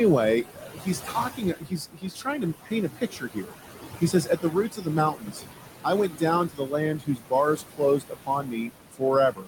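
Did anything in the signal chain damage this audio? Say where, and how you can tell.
Yes. Noise suppressor artifacts come from the call-processing stage and run through the whole clip. The room noise, sitting about 9 dB below the speech, is pulled down by about 17 dB between words and swells back under them. Unlike a hard gate, the suppression works band by band and never reaches silence.

Speech cut by the noise suppressor, from the same stage, appears at 0.43–3.54 s (about two seconds affected), at 4.01–5.43 s (well under a second), and from 5.84 s to the end. Soft sounds are dropped by about 17 to 19 dB along with the background and come out swallowed and faint. The audio stays continuous, so this is not a packet-loss dropout.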